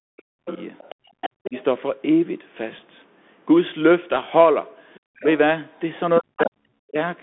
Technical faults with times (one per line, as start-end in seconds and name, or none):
0.00-7.22 Bluetooth CVSD headset codec
0.00-0.48 speech suppressed in double talk
0.46-1.64 other side's voice leaking through
0.95-1.19 background gated by the echo canceller
1.47-1.55 speech suppressed in double talk
4.94-5.24 other side's voice leaking through
5.18-5.25 speech suppressed in double talk
6.19-6.97 speech suppressed in double talk
6.37-6.43 other side's voice leaking through